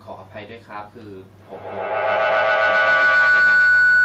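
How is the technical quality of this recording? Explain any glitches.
The recording has one serious fault: feedback howl takes over the speech from 1.4 s and continues to the end of the clip. A loop has formed between a microphone and a loudspeaker in the same room, and each pass through it returns more level than the last. The repeats grow rather than decay and narrow to the frequency the loop favours, around 1.5 kHz. The result is a piercing tone that climbs to about 19 dB above the speech, with the loop's round-trip delay at roughly a tenth of a second. It does not stop within the clip.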